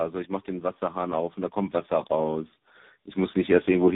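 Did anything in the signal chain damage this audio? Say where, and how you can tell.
Yes. Throughout the clip the speech sounds rough, muffled and warbly, with nothing above 3.8 kHz. This is tandem speech coding in the codec and network path. Each link decoded and re-encoded the call, so errors compounded. The sound fits several speech codecs in series, ending in a low-rate AMR-NB.

Automatic gain rising occurs in call processing. From 0.45 to 2.61 s the speech and background swell together by about 7 dB, and again from 3.13 s to the end by about 4 dB. The gain control judged the input too quiet and ramped up gradually.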